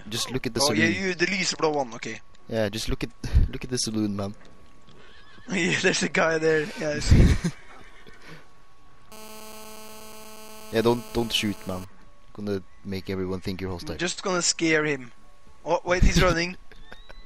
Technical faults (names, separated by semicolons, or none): GSM phone buzz